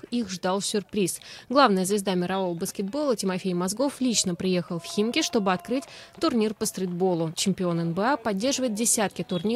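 There are no technical faults to describe in this audio.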